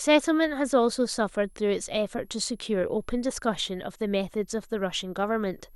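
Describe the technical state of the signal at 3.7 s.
A switching supply whistle runs through 3.7 s, as throughout: a faint high tone drifting between about 10.8 and 11.8 kHz, far below the speech, unlike a fixed-pitch tone.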